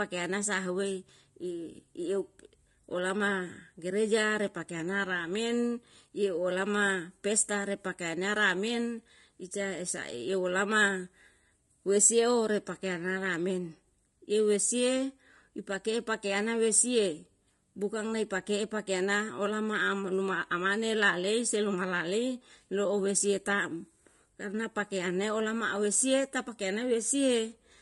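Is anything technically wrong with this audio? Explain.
Yes. Throughout, the speech sounds rough and grainy, with noise between pitch harmonics and a thin, synthetic top end, likely low-delay AAC compression whose short frames, at a rate that fits about 32 kbps, resolve harmonics poorly.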